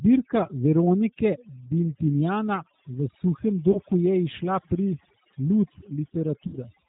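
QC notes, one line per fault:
throughout: overdone noise removal. The denoiser was pushed too hard, so any frequency band sitting near its noise estimate is cut down or removed outright, and the quieter parts of the speech are taken along with the hiss. The background drops to near silence dotted with isolated twinkling specks, with the voice's softer harmonics and consonant detail stripped away band by band.
throughout: G.729 codec. The speech is carried at 8 kbit/s and rebuilt from a vocal tract filter, a pitch predictor and a few pulses per subframe rather than from the waveform itself. Nothing above 4 kHz survives, so the top end is gone, and the coding damage is plainly audible as a rough, slightly synthetic edge on every syllable, with any residual background warbling instead of sounding like natural noise.
3.72–3.79 s and 6.47–6.57 s: VoIP packet loss concealed by the speech codec. 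At 3.72 s, just before "je izšla pri", about 30 ms of audio went missing. At 6.47 s the gap is about 60 ms, which points to two consecutive packets. In both, the decoder stretched its last pitch and filter state forward at falling gain, producing a brief, fading stretch of sound. Because each frame depends on the previous one, the speech stays weak and distorted after the gap, so the damage lasts longer than the loss itself.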